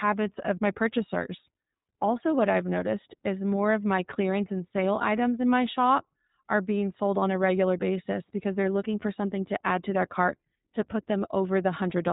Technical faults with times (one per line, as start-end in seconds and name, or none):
0.00-12.13 iLBC codec